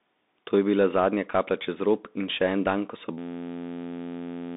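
Throughout, the Bluetooth CVSD headset codec confines the sound to about 200 Hz–3.7 kHz. A spectrogram shows a flat ceiling near 3.8 kHz, with granular hiss and scratchy, distorted sibilants.

From 3.18 s, just after "en dan ko so", to 4.56 s, a system hang loop repeats one 11.61 ms slice, which fits a 512-sample buffer. It becomes a steady 86.1 Hz buzz, shown as identical repeating cycles in the waveform and evenly spaced harmonic lines on a spectrogram.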